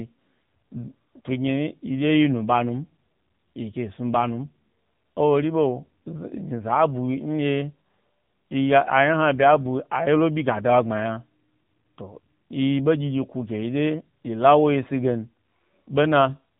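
Throughout the clip, the speech has passed through the AMR narrowband mobile codec, which models the vocal tract from a handful of pulses per 5 ms subframe at an 8 kHz sampling rate. The damage is plainly audible. Nothing above about 3.8 kHz survives, so the speech sounds boxed-in and telephone-like. The coarse pulse coding adds a buzzy, synthetic edge that fits one of the lower modes, around 8 kbit/s.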